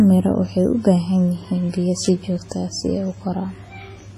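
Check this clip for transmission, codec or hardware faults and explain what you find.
Two faults are present: codec damage across the whole speech clip, and a single burst of clicks just after 2 s.

Throughout, there is heavy WMA compression damage, likely from a first-generation WMA encoder at a low bitrate, with the sound pointing to roughly 24 kbps. A transform codec of this kind quantises long blocks coarsely, so the error smears over tens of milliseconds and weak spectral detail is discarded. The result is a ringing, washy quality with hiss that swells and fades with the speech, and nothing is present above 15.2 kHz.

From 2.03 to 2.06 s there is an electrical switching spike, a sharp snap lasting about 30 ms that sits on top of the speech. This is the likely signature of a nearby switch, motor or static discharge arcing briefly, with the audio line picking up that interference as a short, tight cluster of clicks that is separate from the wanted signal.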